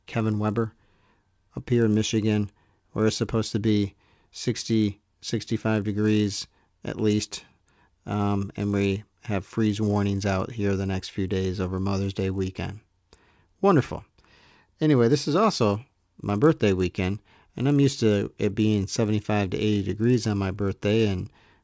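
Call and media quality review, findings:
Resampler restarted on every block, throughout: 50 Hz buzz riding on the speech, absent in pauses. The 24 kHz to 16 kHz converter resets each 20 ms block, lacking neighbouring samples at edges, so each boundary leaves a small error at block rate.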